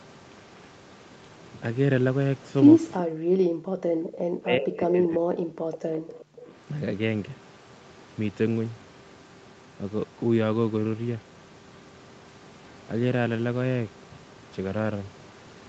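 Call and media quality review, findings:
Speech suppressed in double talk, 2.98–5.48 s. Speech dips hard, roughly 40 dB at worst. Likely the echo canceller mistaking near-end speech for loudspeaker echo.

Echo leak at 4.05–4.09, 6.19–6.25 and 6.47–6.54 s. Brief delayed copies, 372 ms late, about 20 to 30 dB down. Likely residual echo passing the canceller.

Background gated by the echo canceller, 5.76–6.47 s. Room sound drops about 40 dB during loudspeaker playback, then returns when suppression releases.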